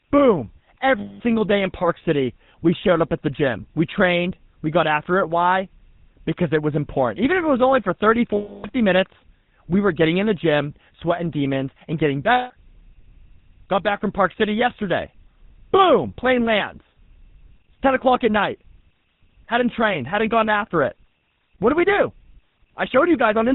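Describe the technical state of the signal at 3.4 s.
At 3.4 s the speech has passed through a GSM full-rate codec, which runs the whole clip and fits a 13 kbps coder. It models the vocal tract, excites it with sparse regular pulses, and cuts everything above 4 kHz, leaving the voice dull, buzzy and plainly gravelly.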